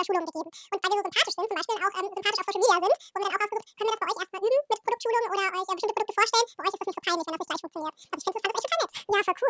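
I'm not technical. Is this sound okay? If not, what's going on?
No. The whole clip has a wrong sample rate fault: the speech is played back twice as fast as it was recorded, with nothing adjusting for the difference. Everything runs at double speed and sounds a full octave higher, which fits 8 kHz audio being played as if it were 16 kHz. Speed and pitch rise together, and that is the giveaway. A simple pitch change would leave the pace normal, and a speed-up alone would keep the pitch natural.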